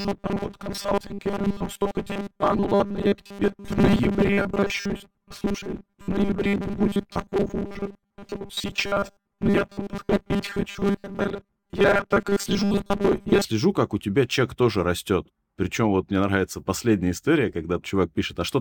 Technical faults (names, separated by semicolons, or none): robotic sound from repeated short buffers